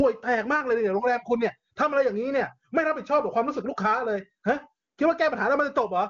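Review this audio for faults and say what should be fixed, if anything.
Nothing here needs fixing. The speech has passed through the AMR wideband (HD Voice) codec at 23.85 kbit/s, which leaves the band empty above about 7.3 kHz.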